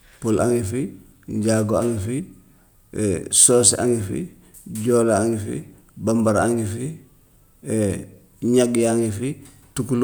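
No technical faults can be heard anywhere in this speech recording.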